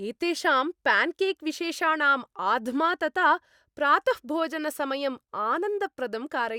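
No technical faults can be heard anywhere in this speech recording. There are no events to place in time and no faults to explain.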